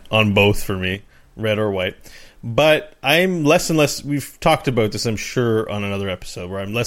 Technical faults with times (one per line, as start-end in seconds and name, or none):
0.95-6.86 one channel drops out